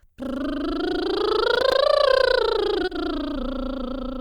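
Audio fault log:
1.55–1.72 s, processor overload crackle: a short burst of gritty crackle tears across the music as the processor misses buffer deadlines several times in a row, each miss dropping a few milliseconds to silence with hard edges, which fits a buffer of around 3 ms.
2.85–2.89 s, short concealed packet loss: about 20 ms of audio never arrived, so the receiver stretched the preceding sound over the hole and blended back in, leaving a brief smear where the music momentarily loses its definition.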